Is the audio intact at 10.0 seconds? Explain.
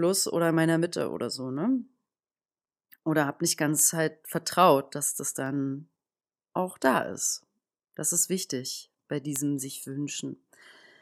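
No. Word clock ticks run from 0.18 to 10.75 s, so 10.0 s falls inside. An unlocked digital clock slips about every 0.3 s, dropping or repeating one sample and leaving a sharp tick.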